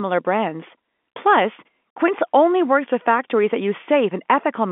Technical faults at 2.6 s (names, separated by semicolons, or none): none